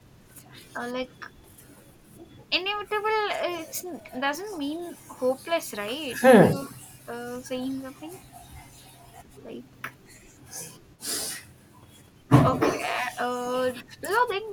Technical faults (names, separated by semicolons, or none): speech suppressed in double talk